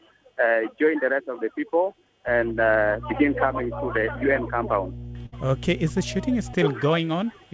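At 2.27 s a steady mains hum comes in at 60 Hz and sits there until 6.54 s, roughly 15 dB under the audio. That's the classic ground-loop or nearby-transformer pickup, with the power line leaking straight into the signal path.

While that hum is still going, there's a burst of packet loss at 5.26 s. About 60 ms of audio never arrived, so the receiver stretched the last bit of sound over the gap, fading it out, before jumping ahead to 5.34 s with that chunk gone. Everything also tops out at 8 kHz, which fits a wideband call codec.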